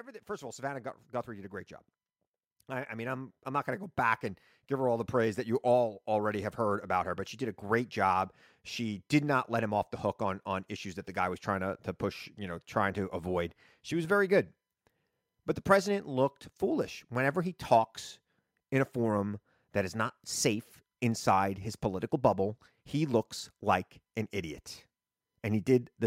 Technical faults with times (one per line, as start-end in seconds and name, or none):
0.05-9.07 automatic gain rising